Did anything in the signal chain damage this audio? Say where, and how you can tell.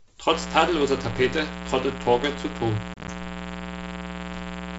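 Yes, two places. The first is in the analogue wiring: a mains buzz comes in at 0.32 s and runs to the very end. It's a raspy 60 Hz buzz with harmonics stacked well up into the kilohertz range, sitting only about 10 dB under the speech. That spiky, edgy character points to switching spikes from a dimmer or rectifier, or an unshielded run, getting into the line twice per mains cycle.

The second is on the network side: packet loss on an ADPCM call between 2.94 and 3.10 s. You hear about 70 ms of hard-edged gaps scattered across a 140 ms stretch, the longest single hole 30 ms, which fits roughly seven small packets going missing. Each gap is filled with silence, and when sound resumes the speech comes back slightly distorted for a moment. The receiving decoder's predictor and step size have drifted out of step with the sender's. The G.722 coding itself shows only faint traces.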